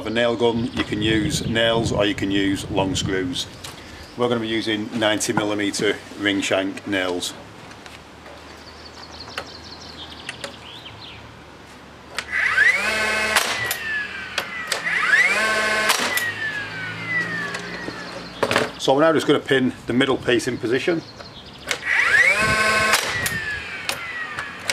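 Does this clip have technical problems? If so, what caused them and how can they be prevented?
No, nothing in this recording points to a technical problem, so there is no cause to trace and nothing to prevent.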